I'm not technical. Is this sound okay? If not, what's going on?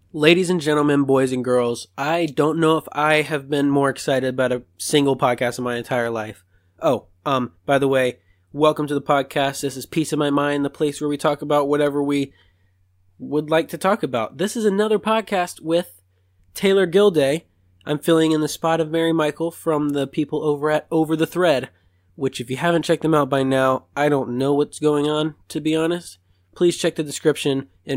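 Yes, the recording has no technical faults to point to anywhere along its length.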